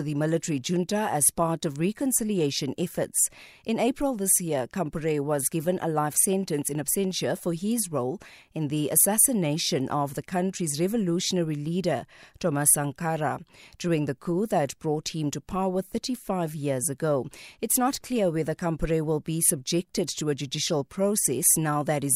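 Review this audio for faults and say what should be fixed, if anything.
Nothing stood out on listening to this speech recording, so there is nothing here that needs fixing.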